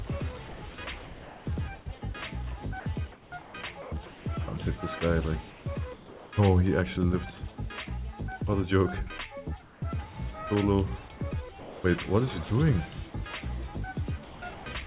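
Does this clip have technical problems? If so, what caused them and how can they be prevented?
Yes. There's sound chopped by the voice detector from 0.48 to 1.46 s and again from 14.24 to 14.66 s. The audio gets choppy there, likely because the sender's voice detector kept toggling transmission on and off. A less aggressive detector threshold, or a longer hangover time, would stop it.

Comfort noise replaces the background from 3.12 to 4.26 s, 5.5 to 6.32 s and 9.62 to 9.82 s. The real background gives way to a flat, featureless hiss. In the last stretch that hiss sits about 4 dB quieter, with the background about 25 dB below the loud parts. The likely cause is discontinuous transmission, with the receiver filling the gaps. Turning DTX off keeps the real background.

There's also sound dropped by the voice detector at 3.82 to 3.92 s, 11.6 to 11.84 s and 13.1 to 13.14 s. Brief bits of sound vanish into steady noise and then snap back, likely because the detector mistook quiet sound for background. 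Tuning detector sensitivity, or disabling VAD, prevents this.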